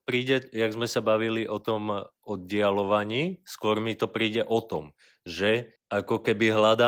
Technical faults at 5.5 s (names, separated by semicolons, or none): none